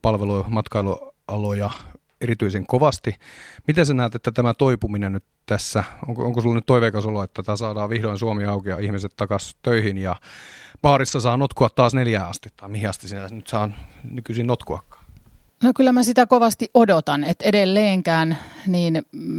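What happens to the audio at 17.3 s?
At 17.31 to 17.33 s, one lost packet is rebuilt from error correction: the following packet carried a low-bitrate copy, so its 20 ms play back rough and noisy. Unlike a dropout, there's no gap.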